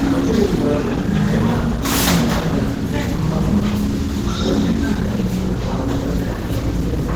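This everyday sound recording carries plainly audible Opus compression throughout. Tones turn grainy, rough and hoarse, with a muffled quality, while the top stays open to about 20.3 kHz. That likely comes from a low bitrate, fitting around 16 kbps, forcing a speech-style hybrid mode.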